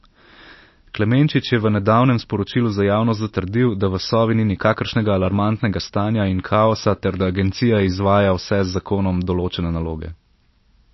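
From start to finish the speech carries plainly audible damage, likely MP3 compression at a low bitrate, around 28 kbps. Nothing is present above 5.8 kHz, so sibilants lose their edge, and weak spectral detail flickers between frames, giving a watery, swirling texture.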